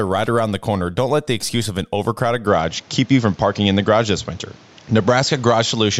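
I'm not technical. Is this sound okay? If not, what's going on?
No. From about 2.47 s to the end, the speech turns duller and flatter, as if it had suddenly moved to a cheaper microphone. The brightest part of the sound is gone (nothing above about 7.6 kHz), the loudness shifts, and a faint new background noise appears, with no gap at the change. The likely cause is an input switched to a poorer device. Unlike simple muffling, the tone, loudness and background noise all change together at one instant.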